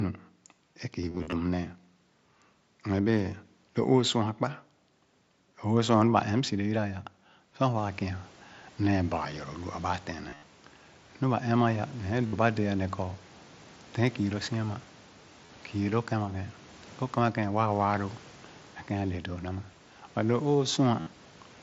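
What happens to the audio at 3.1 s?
Nothing goes wrong at 3.1 s; the audio there is intact, with no dropout, glitch or other fault.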